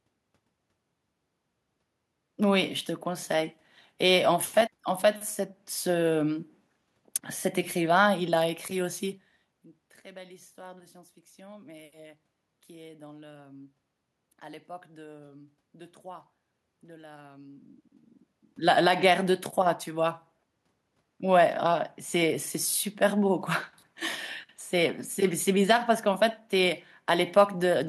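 A speech recording with nothing technically wrong in the capture or playback chain. Some background noise from the room sits under it, and the voice level shifts at around 9 s and again around 18 s as the talker moves relative to the microphone.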